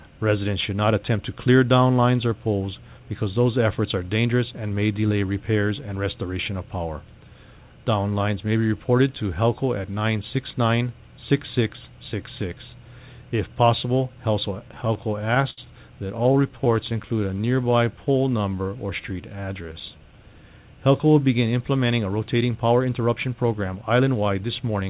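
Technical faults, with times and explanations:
14.6–15.6 s and 16.08–17.11 s, repeated stalls (stutter): packets reached the receiver late, so the jitter buffer kept running dry, 11 times in the first run and 12 in the second. Each gap was bridged by extending the last sound, about 160 ms and 117 ms in all, the longest 72 ms, so nothing drops out but the audio catches and drags.
16.93–20.35 s, jitter buffer slow-down: with its reserve low, the receiver rebuilt it by repeating single pitch periods over and over, adding about 403 ms. The audio plays at 88% speed with unchanged pitch, sounds stretched out, and may warble slightly.
21.98–24.89 s, jitter buffer speed-up: the buffer then held more audio than its target, so the receiver trimmed short pitch-period pieces in quick succession, cutting roughly 0.3 s. Playback runs at 110% speed with pitch held, giving a rushed, hurried feel through to the end.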